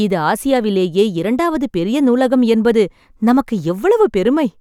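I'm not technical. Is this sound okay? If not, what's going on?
Yes, nothing in this recording stood out as a problem when I listened to it.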